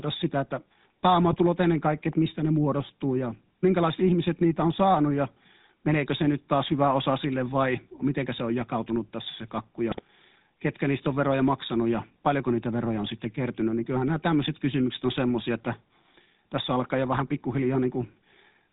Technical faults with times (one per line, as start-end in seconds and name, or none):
0.00-18.72 GSM full-rate codec
1.32-1.37 GSM bit errors
9.91-10.01 GSM bit errors
17.12-17.21 GSM bit errors